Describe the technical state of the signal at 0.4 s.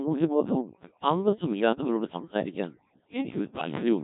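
At 0.4 s, as throughout the clip, overdone noise removal is pulling frequency bands near the noise estimate down to nothing, leaving a background that drops and breaks up into twinkling specks. The speech also passes through the Codec 2 vocoder, rebuilt from pitch, voicing, energy and envelope, which fits a bitrate around 1.3 kbit/s; heavy damage leaves it robotic and buzzy.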